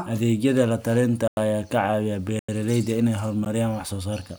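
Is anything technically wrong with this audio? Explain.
Yes. The speech drops out abruptly three times: short holes from 1.28 to 1.37 s and from 2.39 to 2.49 s, each about 93 ms and fitting a 4096-sample block, plus a brief tick at 3.45 s. These are blocks of digital silence, where samples were replaced by zeros, likely because the output buffer wasn't filled in time.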